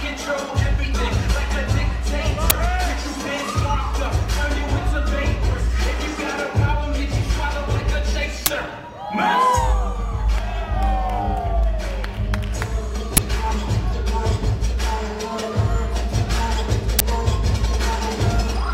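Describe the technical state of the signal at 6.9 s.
At 6.9 s the signal is intact, with no dropout, clipping, glitch or other technical fault to be heard.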